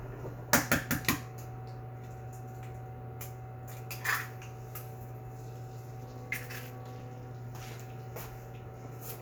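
From 6.01 to 7.31 s the sound takes on overlap-add ripple: frames rejoined with mismatched overlap make the level swing by about 11 dB at around 400 Hz. The result is a buzzy, robotic tone, far faster and more regular than any musical tremolo.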